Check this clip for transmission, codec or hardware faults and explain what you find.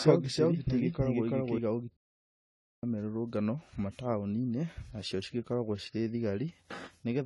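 Three faults are audible: a doubled audio track at the start, a playback stall shortly after, and AAC compression damage across the whole clip.

From 0.0 s, already under way, until 1.58 s, a doubled audio track plays: a second copy of the speech runs around 300 ms behind at about the same level, likely from a slower second capture path. It sounds like a dry, roomless stutter-echo that then cuts out abruptly. A waveform shows each syllable repeated at a fixed offset, and a spectrogram shows the same pattern twice, shifted in time.

From 1.97 s to 2.83 s a playback stall silences the audio for about 0.86 s, likely because the player ran out of data or was blocked. The speech stops mid-flow, then picks up again. The waveform shows a flat line, and the spectrogram a blank vertical band.

Throughout, AAC compression damage is plainly audible. The sound is dull and smeared, with warbly, fizzy sibilants, which fits AAC-LC at roughly 32 kbps. 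A spectrogram shows nothing above 11.5 kHz, with a hard ceiling.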